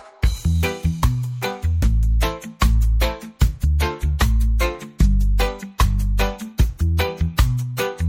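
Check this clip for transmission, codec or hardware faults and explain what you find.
One fault is present: the adaptive stream dropped to a lower bitrate from 2.11 s to the end at 8.08 s. The delivery side stopped sending the higher-quality encoding and switched to a much leaner one, which fits a change from roughly 128 kbit/s MP3 to 48 kbit/s. With fewer bits available, the encoder discards more high-frequency content and quantises more coarsely. Codec artefacts abruptly rise, with no gap at the switch.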